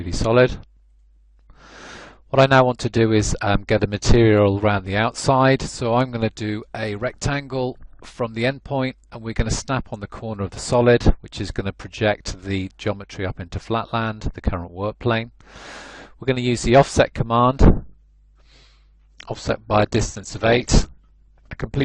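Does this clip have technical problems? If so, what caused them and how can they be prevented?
Yes. From 17.79 s to the end, the audio abruptly loses clarity without any gap: codec artefacts rise and nothing remains above 8.2 kHz. This is an adaptive stream at a lower bitrate. When the connection slowed, the player switched to a lower-bitrate version of the same stream, and the encoder at that rate discards upper frequencies and fine detail. The sound points to a drop from roughly 64 kbit/s to roughly 12 kbit/s Opus. To prevent it, use a stable, faster connection or a larger playback buffer, or pin the player to a fixed higher-quality rendition.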